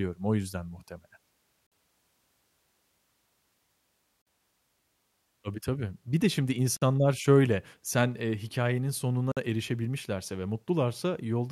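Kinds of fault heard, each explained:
Gap between chunks: the speech is handled in 2.5-second pieces, and a 50 ms silence sits at each join, so the flow halts briefly at 1.67, 4.22, 6.77 and 9.32 s, for instance right after "yüzden muhtemelen" and after "de şimdi". The holes have hard edges and recur at a steady interval, and the speech picks up exactly where it stopped. That sets it apart from a dropout, where a stretch of sound is actually missing.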